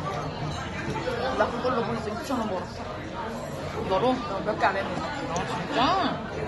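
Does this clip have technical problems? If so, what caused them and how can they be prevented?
Yes. AAC compression damage is plainly audible throughout. Nothing remains above 11.5 kHz, and the audio sounds dull and smeared, likely from a low bitrate near 32 kbps. Encode at a higher bitrate to prevent it.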